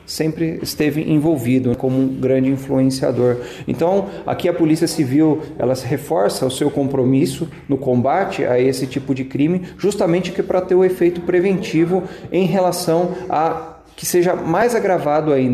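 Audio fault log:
No technical faults are audible anywhere in the signal, which holds steady and intact across the whole clip.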